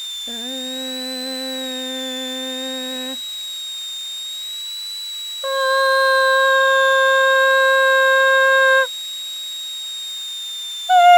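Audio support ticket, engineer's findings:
Switching supply whistle under the music for the whole clip, high tone near 4 kHz, wandering between about 3.5 and 4.1 kHz, roughly 10 dB below programme level. Probable component: switch-mode PSU in burst mode or beating against another supply. Drifting pitch, not a fixed tone or mains harmonics, separates it from hum or a steady oscillator leak.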